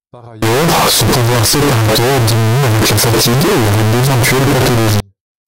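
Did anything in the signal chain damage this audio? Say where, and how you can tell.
Yes: from 0.42 to 5.00 s the speech becomes harsh, very loud distortion, likely signed and unsigned mixed up at sample-format conversion. Unlike clipping, even soft sounds are as loud as the strong ones.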